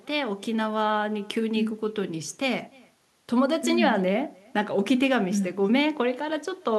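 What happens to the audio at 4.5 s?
At 4.5 s the speech is shadowed by an echo with no canceller, a fault that runs through the whole clip rather than starting at that moment. The far end is playing the call over a loudspeaker, its microphone picks that sound up, and nothing strips it out, so the talker's own speech returns after the network round trip. The copy lags by roughly a third of a second and sits about 29 dB below the direct speech, heard as a faint, thin repeat trailing each phrase.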